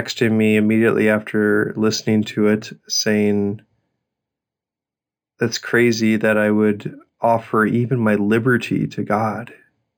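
Speech, with imaging from linear upsampling throughout. Sibilants carry a faint metallic shimmer, about 20 dB down, from mirrored images between 5.5 and 11 kHz. This fits audio raised from 11 kHz to 44.1 kHz by straight-line interpolation.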